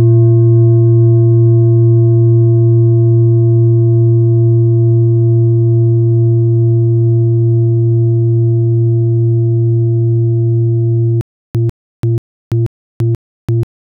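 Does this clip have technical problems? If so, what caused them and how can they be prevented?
Yes. From 11.21 s to the end, the audio breaks into a stutter with silent gaps. A burst of about 147 ms plays, then about 338 ms of digital silence follows. The cycle repeats every 485 ms, five times. The player likely stalled on a starved buffer and replayed its last fragment at each retry. The sound that belonged in those gaps is gone. Larger playback buffers and a steadier network or disk feed would prevent this.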